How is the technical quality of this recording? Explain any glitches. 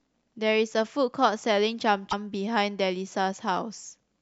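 One defect stands out in this speech clip. From 2.10 to 2.14 s the sound skips ahead and a brief glitch fills the gap, lasting about one 26 ms frame. This is likely a broken MP3 bit reservoir: frames were lost, so the following frame borrowed bytes belonging to another frame and decoded them wrongly.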